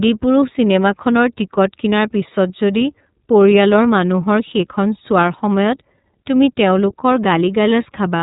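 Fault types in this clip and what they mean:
iLBC codec: The speech sounds boxed-in and narrow, with nothing above 4 kHz, and it has a plainly audible rough, slightly synthetic grain throughout. This comes from the iLBC narrowband VoIP codec, which encodes the excitation of each 30 ms frame on its own without drawing on the previous frame. That coarse frame-by-frame rebuilding produces the roughness. The level of damage fits the codec's 13.33 kbps mode.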